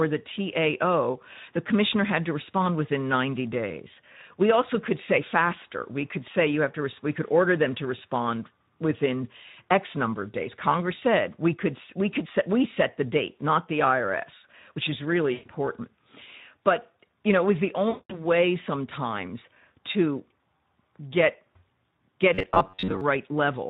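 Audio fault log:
throughout: Speex codec. The speech passes through Speex at 11 kbps, which leaves the CELP coder too few bits to model the excitation that drives its vocal-tract filter. The codec damage is plainly audible: voiced sounds come out grainy, hoarse and noisy rather than clean. Whatever high band is present is a shaped noise fill rather than real detail, which gives the top end a hissy, synthetic quality.
15.34–15.49 s and 17.89–18.23 s: VoIP packet loss concealed by the speech codec. Packets went missing right after "which is really" and again after "know it was the", before "sometimes to". The first gap is about 120 ms, which fits six 20 ms frames, and the second is about 200 ms. The decoder filled each gap by extending its last pitch and filter with falling gain. Each gap therefore becomes a fading stretched sound, and the sound stays thin for a moment after real packets resume.
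22.35–23.01 s: robotic sound from repeated short buffers. Fresh audio most likely stopped arriving often enough, so the playback software kept replaying its last short buffer, and roughly 70 percent of this stretch is repetition rather than new sound. The loop period imposes a fixed buzz at 93.8 Hz, a cycle of about 10.7 ms. The result is a rigid, metallic drone that only loosely tracks the speech.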